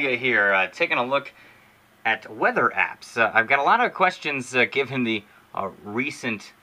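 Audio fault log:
No faults are heard in this clip. Nothing in the audio stands out as a technical defect.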